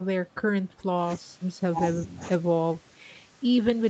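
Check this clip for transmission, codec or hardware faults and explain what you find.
Nothing faulty can be heard in this speech.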